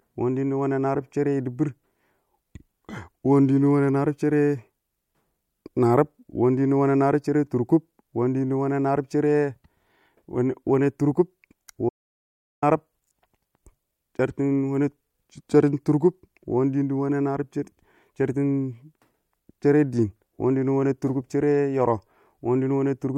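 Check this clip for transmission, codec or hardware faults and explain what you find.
An audio dropout to silence occurs from 11.89 to 12.62 s. The input was likely lost, through a disconnect, link failure or mute, while recording continued writing zeros. The speech cuts off abruptly into about 0.73 s of total silence, room tone included, then resumes mid-flow.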